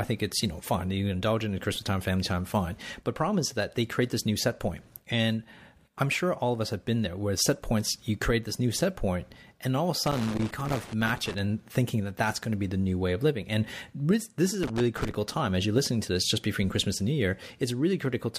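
Loose connector crackle at 10.07 to 11.38 s and again at 14.63 to 15.15 s: a worn contact intermittently breaks the speech signal, producing irregular bursts of scratchy crackle.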